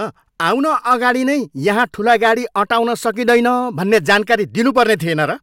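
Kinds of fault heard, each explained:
Hard clipping: speech peaks pushed about 3 to 7 dB past a stage's limit are sliced flat, giving abrupt crackle, not soft saturation's rounded warmth.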